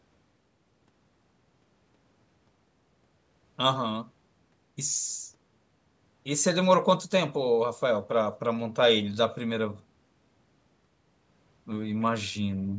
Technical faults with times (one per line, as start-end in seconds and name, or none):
none